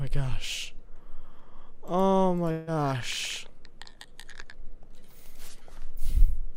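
From 2.51 to 2.69 s, the last sound smears into a fading buzz, then resumes with a short stretch gone. This is likely a long network dropout.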